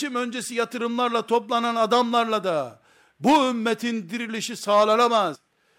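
At 5.34 s, near the end of the speech, there is a brief burst of damaged data in a compressed stream. For a split second the decoder is handed corrupted bytes where a valid frame should be. It cannot decode them cleanly. It loses its place and has to find the next good frame header before normal playback resumes. The result is a short, sharp chirp or blip cutting into the speech.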